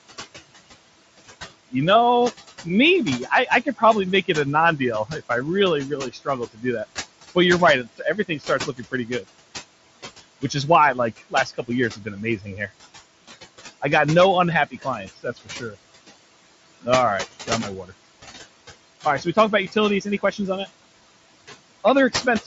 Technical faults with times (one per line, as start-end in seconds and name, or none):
0.00-22.47 noise suppressor artifacts
1.72-9.24 speech cut by the noise suppressor
10.19 concealed Bluetooth headset packet loss
10.42-12.69 speech cut by the noise suppressor
13.81-15.75 speech cut by the noise suppressor
16.81-17.91 speech cut by the noise suppressor
19.05-20.39 speech cut by the noise suppressor